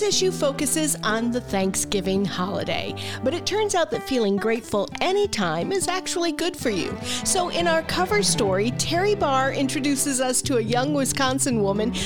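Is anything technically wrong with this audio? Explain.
No, nothing technically wrong can be heard in this audio. There is no audible sign of trouble in how it was captured, processed or delivered.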